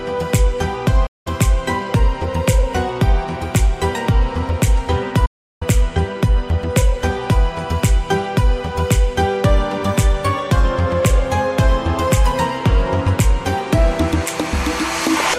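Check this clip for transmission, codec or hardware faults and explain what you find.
Two digital broadcast dropouts are present. The first runs from 1.06 to 1.27 s, about 0.2 s of silence. The second runs from 5.26 to 5.62 s, close to 0.37 s. In each case the receiver stopped getting decodable frames, either through signal loss or failed checksums, and muted output until valid data resumed. The audio fades out over about 8 ms, sits silent, then picks up further along, and the intervening material is gone. The gap lengths fit whole 32 ms frames being discarded.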